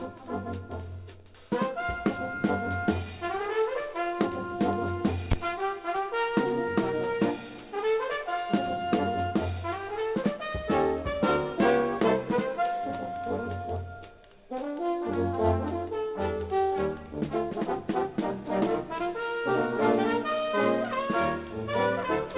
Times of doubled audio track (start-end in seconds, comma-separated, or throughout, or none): none